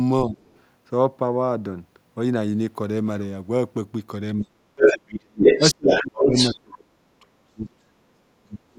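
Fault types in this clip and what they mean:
speech suppressed in double talk: The talker's speech dips sharply at 0.25, 4.4 and 5.58 s and stays low from 6.53 s to the end, by roughly 15 to 35 dB. This is likely an echo canceller turning down both voices at once. Unlike a plain dropout, the losses coincide with the other side talking.
other side's voice leaking through: A second voice sits under the talker. It is very faint at 0.46 s, then about as loud as or louder than the talker between 4.76 and 6.53 s. This is likely loudspeaker echo the canceller failed to remove. Unlike suppression, it adds sound rather than taking the talker away.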